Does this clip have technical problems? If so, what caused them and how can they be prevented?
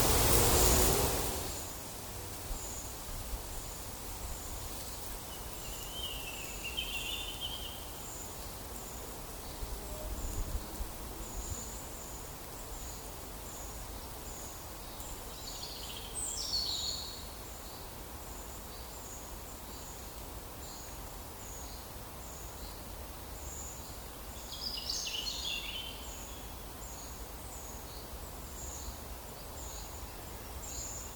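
No, there are no technical problems to prevent here.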